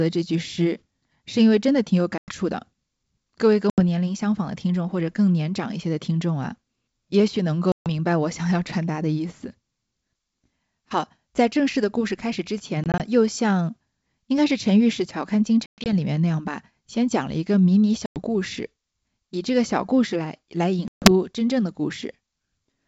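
At 2.18, 3.70, 7.72, 12.84, 15.66, 18.06 and 20.88 s, packet loss on an ADPCM call cuts hard silent holes of 60 to 140 ms in the speech. The decoder's predictor and step size lose track. Each return is slightly distorted, then settles.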